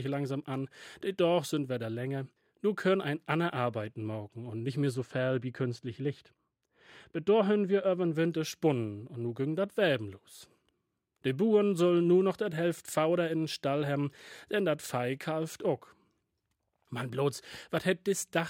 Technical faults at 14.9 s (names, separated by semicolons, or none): none